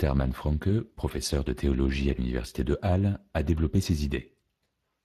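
From start to finish the speech has gone through the Speex codec, and you can plainly hear it. Speex is a CELP coder that models the voice and spends a limited bit budget on the excitation signal, so the voicing comes out grainy and a bit hoarse rather than clean. The character fits a rate somewhere around 22 kbps. Nothing survives above about 15.3 kHz, so the top end just stops there.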